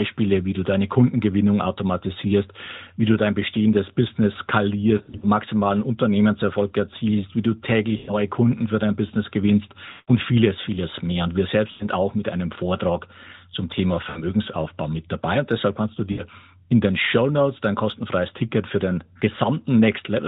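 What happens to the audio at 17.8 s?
Nothing goes wrong at 17.8 s: the speech continues intact through that moment, carried by the narrowband AMR mobile codec as it is throughout.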